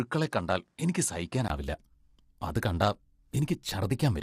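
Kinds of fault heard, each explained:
Low-delay AAC compression: Throughout the speech the voice sounds rough and grainy, with noise filling the gaps between harmonics and a top band that seems lowered or synthetic. That is the damage a low-delay codec of the kind used in video calls does when it is starved of bits, here plainly audible, at a rate that fits about 32 kbps. The likely culprit is AAC-ELD. Unlike a bandwidth limit alone, the grain sits inside the voice itself and runs through the whole clip.
Input switched to a poorer device: From the start to 1.5 s the sound is narrower, with nothing above about 10.6 kHz, and a new noise floor sits roughly 45 dB under the speech. Then, after a gap of about 20 ms, it changes character, with the level staying about the same. This points to the recording likely having run through a different, lesser microphone or headset profile before the input changed. 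What separates it from codec damage is that the dullness stops at a definite moment rather than lasting throughout.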